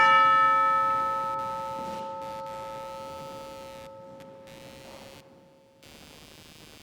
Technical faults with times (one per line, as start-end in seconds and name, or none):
0.00-6.83 computer activity noise